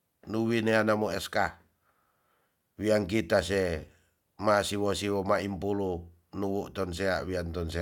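No technical faults can be heard in this speech recording. There is nothing to place in time or to explain.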